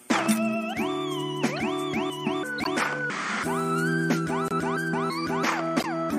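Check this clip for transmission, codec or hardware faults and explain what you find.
Corrupt frames were decoded four times, at 1.56–1.59 s, 2.58–2.67 s, 4.47–4.52 s and 5.79–5.86 s. Each burst spans a few codec frames, where damaged bits were decoded as wrong gains and spectral codes. The result is brief chirps or noise blips, the first fairly faint and the later three louder. Unlike lost-packet concealment, these add foreign energy rather than dulling or repeating the sound.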